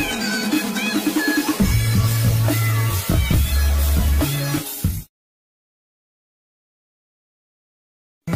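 No technical faults can be heard anywhere in the audio. Nothing breaks the sound at any point, with no interruption, glitch or distortion to mark.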